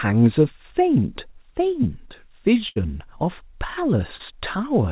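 At 2.68 s there's a burst of packet loss that runs to about 2.79 s. A short stretch of the speech never arrived in time, roughly 80 ms of it, so the receiver kept the last sound going for about 77 ms and let it fade. You hear a held buzz or dying hiss where the speech should be, and then it picks up a little further on with that bit simply gone.

Around 4.16 to 4.22 s there's a short concealed packet loss. This one's smaller: about 40 ms didn't make it, and the decoder papered over it by extending the previous sound for about 37 ms before blending back into the real signal. It comes across as a quick smear or wobble rather than an obvious dropout, and a short consonant sitting in that spot can disappear. All of this rides on a narrowband call path with nothing above 4 kHz, which fits a G.711-style 64 kbps codec.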